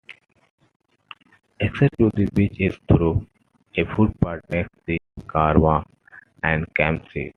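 Speech clip with a playback stall from 4.98 to 5.18 s: the audio drops to silence for about 196 ms mid-flow, likely from the player running short of data.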